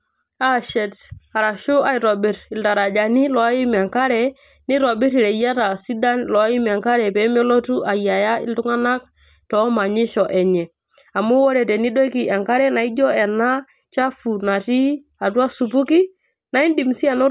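No technical faults can be heard in this recording.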